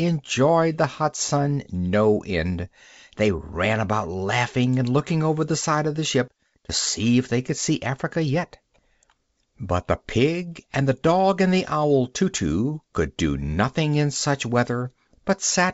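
No technical faults can be heard in this speech recording. It has been carried through G.722 wideband telephone coding at what sounds like 64 kbit/s, which keeps the speech band out to around 7 kHz and leaves at most a faint trace of coding damage.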